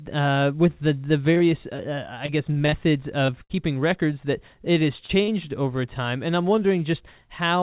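Speech heard through a telephone-band call path, with nothing above 4 kHz, which fits G.711 coding. Short concealed packet loss shows up at 1.34–1.38 s, 1.38–1.42 s, 1.76–1.80 s, 3.26–3.30 s and 5.06–5.11 s. Each hole is about 20 ms, or about 40 ms at 5.06 s, and is patched by extending the preceding sound. It comes through as an isolated smear or wobble, not a sustained texture.

From 2.26 to 2.74 s there is repeated packet loss with a robotic sound. Four gaps, the longest about 39 ms, cover roughly a fifth of that half-second. The patches recur closely enough to give a choppy stretch instead of one separate blip.

A burst of packet loss occurs at 3.44–3.52 s and again at 5.23–5.30 s, with about 60 ms and 40 ms of audio missing. In each, the extended sound fades away as a held buzz or hiss, and the speech then resumes further on with material skipped.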